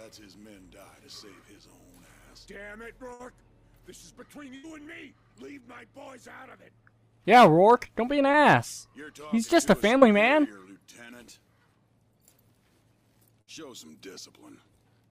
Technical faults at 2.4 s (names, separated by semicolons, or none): none